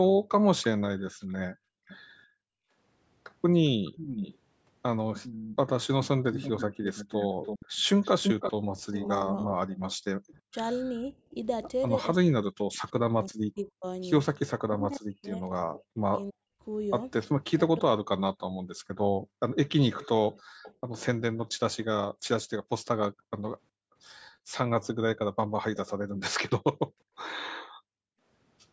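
From 0.17 to 2.74 s, the echo canceller clamps the microphone while the loudspeaker plays, so the background is gated: the room sound drops by about 40 dB, totalling roughly a second. Inside that stretch, from 1.1 to 1.97 s, a faint echo leak is heard, likely an echo canceller letting part of the far-end loudspeaker signal back through, as a weak copy trailing by 400 ms. It returns from 3.66 to 9.08 s at the same 400 ms delay, now fairly prominent. From 8.84 to 17.96 s, speech is suppressed in double talk, likely because the canceller cannot tell the talker from the echo while both sides speak: the voice dips very deeply or breaks up for about four seconds in total. Background gating returns from 18.49 to 24.54 s, with dips of about 40 dB totalling roughly 1.5 s, and a faint echo leak trails by 375 ms between 19.98 and 20.74 s. Gating appears once more from 26.06 to 28.2 s, with dips of about 40 dB that add up to around a second.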